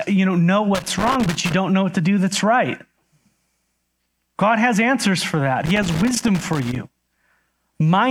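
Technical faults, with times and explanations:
0.75–1.52 s, loose connector crackle after "you know know", before "don't know what to": a worn contact makes and breaks, chopping the speech into irregular scratchy bursts.
5.66–6.76 s, loose connector crackle after "has answers for that": the contact keeps breaking, so the signal cuts in and out with rough crackling.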